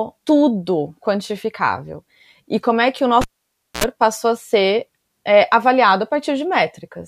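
Cable pulled and plugged in at 3.21–3.84 s: pop, 0.57 s near silence, 66 ms of 60 Hz buzz while only the tip reconnects, then another pop.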